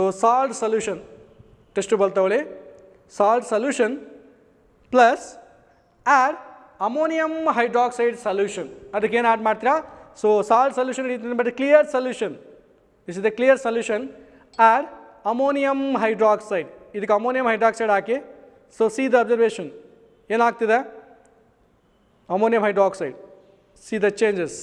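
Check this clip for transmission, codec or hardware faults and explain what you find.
No faults can be heard anywhere in the clip. There is nothing here to flag or explain.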